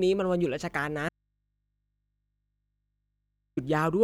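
At 1.09 s the speech cuts out abruptly, leaving only a low mains hum some 55 dB down until it snaps back at 3.57 s. This audio dropout to a faint residue likely came from the signal feed breaking while the open input stayed live.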